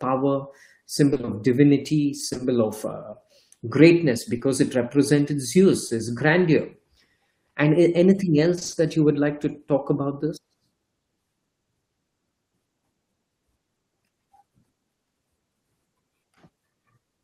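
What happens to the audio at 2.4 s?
Short concealed packet loss runs from 2.29 to 2.41 s, as three back-to-back 40 ms stretches, each with a 20 ms gap, starting at 2.29, 2.33 and 2.37 s, just before "of uh greatness". The receiver extended the preceding sound to fill each hole, so it smears briefly. On a spectrogram the preceding sound's pattern continues there, and the waveform shows a blurred stretch.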